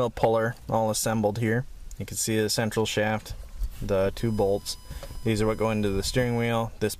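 From 4.20 s to 6.49 s a fixed-pitch USB whine sits under the sound, built on 1 kHz with its strongest component at the 5 kHz harmonic, roughly 25 dB below the programme. It comes from the bus drawing current in regular 1 ms frames, which couples in through shared power or ground. The kilohertz-spaced harmonics and thin, whining tone set it apart from mains hum, which would sit far lower, at 50 or 60 Hz.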